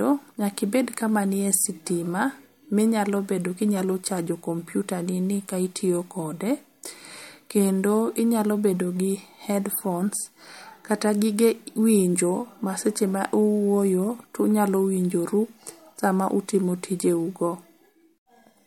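No technical faults can be heard anywhere in the speech.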